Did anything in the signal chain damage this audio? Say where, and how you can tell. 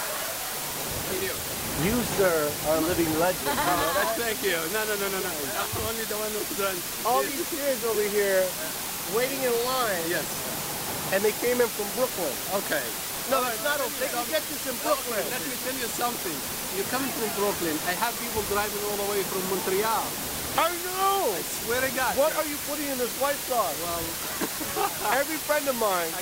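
Yes. Low bit depth with dither at the sample-format conversion stage: a constant, even hiss runs throughout, with the noise almost as loud as the sound itself yet no distortion. Requantising to 4 bits spreads the rounding error into flat white noise, shown as a uniform spectrogram floor and a thick waveform baseline.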